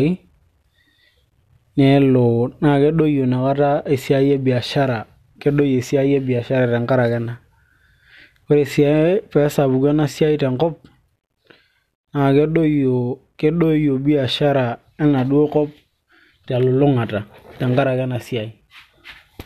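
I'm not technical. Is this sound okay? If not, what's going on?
Yes, this recording of speech sounds fine, with no technical problems to report. Nothing in it stands out as a fault you would need to look into.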